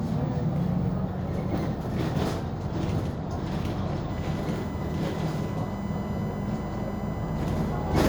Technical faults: USB whine

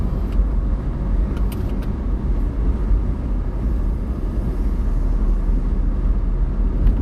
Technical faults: MP2 compression; DAB burbling

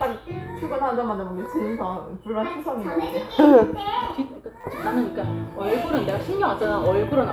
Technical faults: repeated buffer

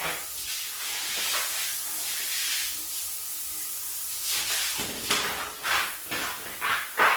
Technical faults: Opus compression

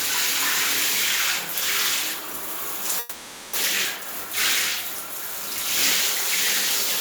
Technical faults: long network dropout

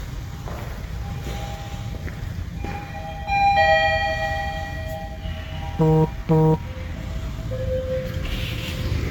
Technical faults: generation loss

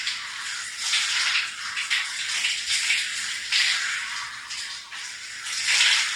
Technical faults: none

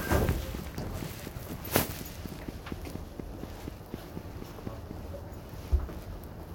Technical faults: train of clicks

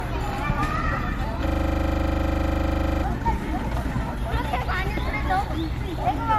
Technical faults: generation loss; system hang loop

